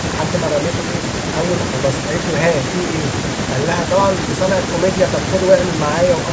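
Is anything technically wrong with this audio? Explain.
No, nothing is technically wrong.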